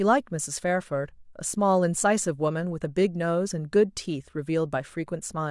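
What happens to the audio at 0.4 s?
Nothing goes wrong at 0.4 s; the speech runs on intact through that moment, with no dropout, click or distortion.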